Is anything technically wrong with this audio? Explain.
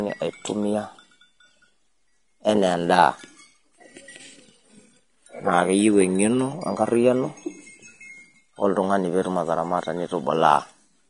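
Yes. Throughout, the speech sounds hissy and grainy, likely from Vorbis compression at a low bitrate around 33 kbps. Coarsely quantised treble turns to noise, and a spectrogram shows a hard ceiling at 10.6 kHz with speckled energy beneath it.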